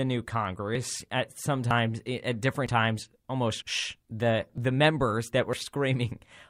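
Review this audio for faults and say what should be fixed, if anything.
Audio missing between chunks in this speech: short skips, each losing roughly 40 ms, at 0.75, 1.71, 2.66, 3.62, 4.58 and 5.53 s, likely from one-second chunk handoffs dropping samples. Fix by buffering continuously across chunk boundaries so nothing is lost between chunks.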